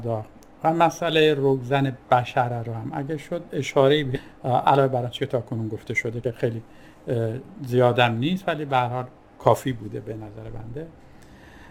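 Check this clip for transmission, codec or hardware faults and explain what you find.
Two kinds of fault are audible: a forward jump just after 4 seconds, then two stretches of hurried playback.

At 4.15 s the sound lurches forward with no silence or fill in between. Roughly a second of material is simply missing, and the two sides are butted together almost seamlessly. This is a skip ahead: a block of audio was discarded, either lost in transit or dropped by an overfull jitter buffer, while later audio was already queued, so playback resumed from that later point.

From 4.26 s to 5.39 s the sound runs about 8% fast, and from 5.88 s to 7.69 s about 17% fast, the second stretch noticeably rushed, yet the pitch stays where it was. This is jitter buffer speed-up. The buffer was holding more audio than its target, so the receiver trimmed tiny slices a pitch period or so long, over and over, shedding around a tenth of a second in the first stretch and about a third of a second in the second.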